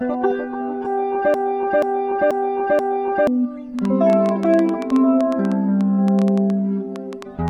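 From 1.34 to 3.27 s, a 0.48 s fragment repeats back to back four times, a broken-record loop, likely from a stalled player or stream, losing the intended audio. From 3.79 s to the end, irregular ticking of roughly 30 clicks, about 7.3 per second and around 10 dB above the sound, forms a train of clicks, likely from electrical interference.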